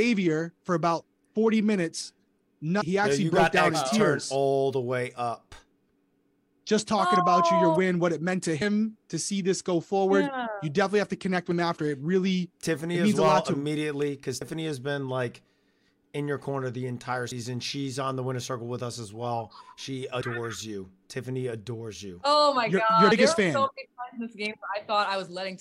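At 2.81, 8.61, 14.41 and 17.31 s the sound skips forward, each time dropping roughly a tenth of a second. This is audio missing between chunks, likely from a recorder handling audio in 3-second blocks and losing a slice at each handover. The skips fall on that 3-second grid. On a waveform each shows a sudden step where unrelated sections butt together, and a spectrogram shows a sharp vertical seam with content jumping discontinuously.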